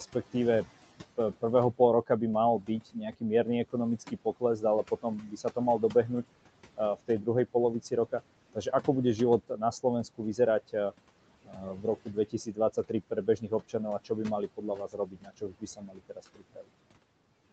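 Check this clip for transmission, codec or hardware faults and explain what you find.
Noise suppressor artifacts run through the whole speech clip, and the suppressor also cuts the speech in four stretches.

Noise suppressor artifacts are present throughout. The suppressor pulls the steady room noise down by about 18 dB frame by frame, so the background drops away in pauses and swells back beneath speech. This is unlike a codec's steady band-limited haze.

Speech cut by the noise suppressor occurs between 1.17 and 6.24 s, 6.77 and 8.88 s, 9.49 and 10.92 s, and 11.45 and 16.7 s. The suppressor mistakes quiet speech for noise and turns it down, by about 17, 17, 10 and 19 dB at the deepest. Word edges sound swallowed: well under a second in the first three spans, about two seconds in the last. Unlike a dropout, there's no gap or click, only fading.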